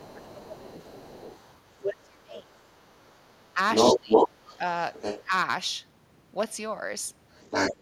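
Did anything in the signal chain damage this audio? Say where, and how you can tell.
Yes, and it happened in call processing. You can hear speech suppressed in double talk: the speech ducks at 0.0 to 0.71 s, 1.81 to 2.65 s, 3.54 to 4.08 s and 5.22 to 5.32 s, dropping by roughly 10 to 25 dB, deepest around 2 s. That's likely an echo canceller that couldn't separate the two overlapping talkers and pulled both down.

The other side's voice leaking through is also there. It's faint from 0.03 to 1.91 s, around 20 dB under the speech. From 2.57 to 5.23 s, and again from 7.31 s to the end, it's actually louder than the talker. That's likely loudspeaker echo the canceller failed to remove from the mic.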